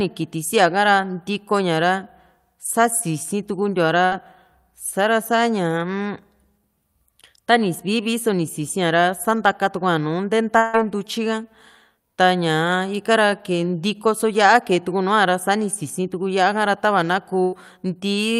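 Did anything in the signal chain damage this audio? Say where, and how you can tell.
Yes, the damage happened in the network stage. There are two bursts of packet loss, at 4.05 to 4.13 s and 17.43 to 17.54 s. At each, the speech stops advancing and the receiver stretches the last sound into a fading buzz or hiss, lasting about 60 ms at the first and about 90 ms at the second. On a spectrogram the bands run flat and dim instead of moving. When speech resumes, about 60 ms and 100 ms of it have been skipped.

At 10.57 to 10.75 s there is a longer gap, likely a network dropout. For about 160 ms the last sound is held and smeared, decaying in level but never reaching true silence, because concealment fills the entire stretch. On the waveform this looks like a shrinking envelope with no new onsets. On the spectrogram, frozen, fading bands replace the changing formants. When speech returns, roughly 160 ms is missing, so the speech jumps forward abruptly.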